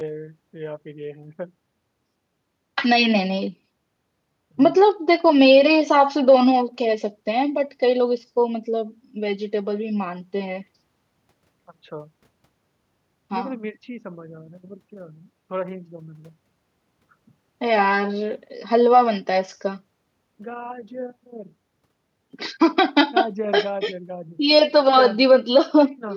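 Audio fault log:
No technical faults can be heard anywhere in the recording, and the signal stays intact and consistent across its whole duration.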